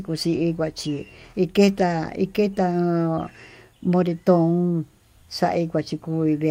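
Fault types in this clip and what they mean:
No faults turn up anywhere in this speech, so there's nothing here to list or explain.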